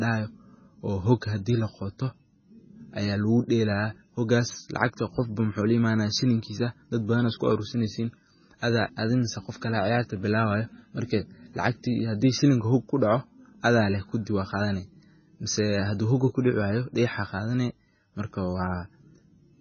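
Speech runs through the whole clip with heavy MP3 compression damage, likely from encoding at a very low bitrate, which fits roughly 16 kbps. Everything above 6.5 kHz is gone, so the sound is dull and the s sounds go metallic and swirly while weak detail flickers in and out. On a spectrogram this shows as a flat ceiling at 6.5 kHz, with patchy, blocky holes below it where faint components switch off frame to frame.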